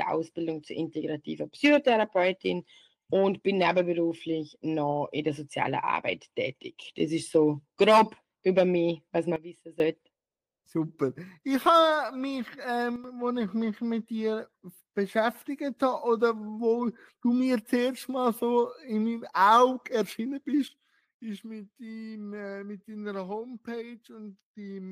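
At 9.36 s the level drops by about 16 dB in one step and recovers at 9.8 s. At 12.96 s it drops about 8 dB until 13.04 s. From 20.68 s it stays about 11 dB lower to the end. Each is a sudden gain jump, likely a gain setting applied without a ramp, so sound and noise fall together.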